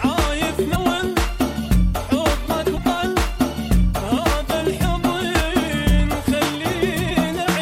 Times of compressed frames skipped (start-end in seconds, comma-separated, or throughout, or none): 0.75, 2.76